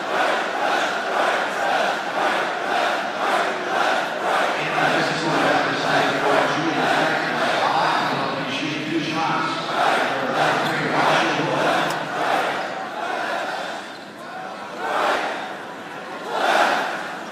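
At 7.73 s, 10.35 s and 15.15 s, compressed frames are skipped. The sound jumps ahead by around 150 ms, 150 ms and then 200 ms, which fits whole 20 ms frames being dropped.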